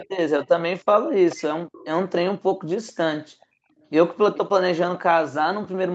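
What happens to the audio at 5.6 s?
At 5.6 s the audio is intact, with the speech carrying on cleanly through the call path and its usual band limit of about 8 kHz.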